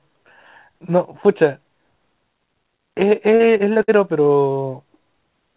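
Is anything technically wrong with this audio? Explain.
Yes. From 3.36 to 3.90 s there is repeated packet loss with a robotic sound. Four short dropouts, the longest about 60 ms, are each patched by extending the preceding sound, so about a quarter of that stretch is synthetic fill and the audio turns choppy and robotic. The narrowband call-codec path, with nothing above 4 kHz, fits G.711 mu-law.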